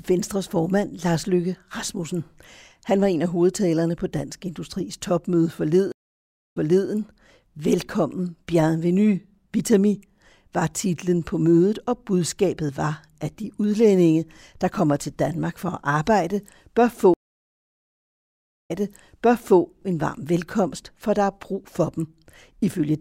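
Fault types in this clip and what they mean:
stream reconnect: the link drops, leaving 0.64 s then 1.56 s of silence, and a fresh decoder resumes 0.34 s and 0.91 s earlier, repeating speech.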